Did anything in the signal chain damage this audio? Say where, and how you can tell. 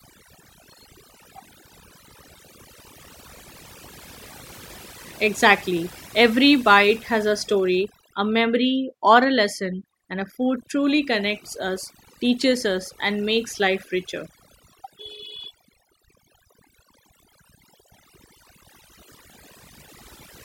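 Yes. Overdone noise removal, at the processing stage, runs throughout the speech. Gaps between phrases fall to near silence with twinkling specks. An over-aggressive suppressor is zeroing bands near its noise estimate, taking quiet speech detail with them.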